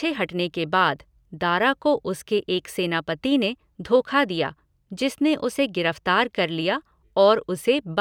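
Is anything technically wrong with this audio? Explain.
No, nothing technically wrong is audible in this speech.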